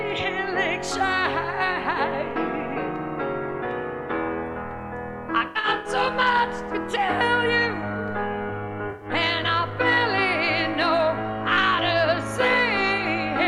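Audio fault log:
5.47 to 5.89 s, AAC frame loss with concealment. About 256 ms of audio drops out in bursts spread over roughly 384 ms, the longest run about a tenth of a second. The decoder patches each gap from the last good spectrum, so the sound turns smeared, noisy or phasey.
8.90 to 9.06 s, AAC frame loss with concealment. About 107 ms of audio is lost and filled the same way. It gives a brief blurred, hissy patch.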